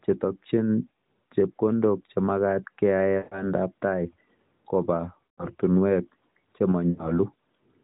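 At 3.18 to 3.45 s, 5.24 to 5.47 s and 6.90 to 7.20 s the speech smears and fades out, then returns rough: lost AMR speech frames (about 140, 140 and 80 ms), concealed by decaying reuse of earlier frames.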